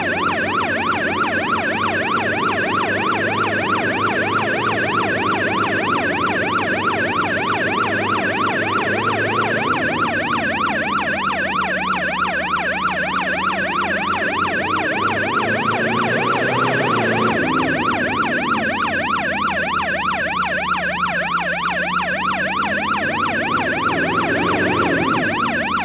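No technical faults can be heard anywhere in the clip. There is nothing to point to at any moment in the audio.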